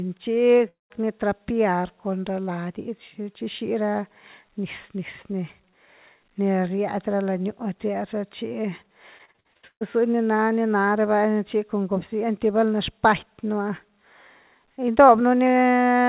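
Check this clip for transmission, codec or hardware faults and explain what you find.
Three faults are audible here, two bunched together right at the start and one in the middle. The sound is narrowband throughout, with nothing above 4 kHz, which fits a G.711 A-law call path.

Short concealed packet loss, 0.58 to 0.62 s: about 20 ms of speech didn't reach the decoder in time, and the receiver papered over it by stretching the preceding sound forward before easing back into real audio. You hear it as a quick smear or wobble.

Long network dropout, 0.68 to 0.92 s: straight after that blip, roughly 220 ms goes missing. The last bit of sound is carried on as a fading buzz for a moment, then about 160 ms of silence sits there before speech picks up again, minus the lost chunk. A stretch of nothing getting through like that is most likely a brief network stall.

Repeated packet loss (robotic sound), 9.18 to 9.83 s: here the losses come in a run of eight gaps, the longest about 0.14 s. 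The receiver keeps patching each hole by continuing the last sound, only for the next hole to arrive, so 53% of that stretch is filled-in rather than real. The result is choppy speech with bits dropped out.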